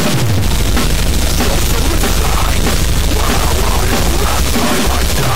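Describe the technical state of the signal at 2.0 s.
At 2.0 s the sound carries a distortion that runs through the whole clip, with quieter stretches filled by a hiss-like noise floor. This is likely a stuck bit, one data bit held fixed, offsetting roughly half the sample values.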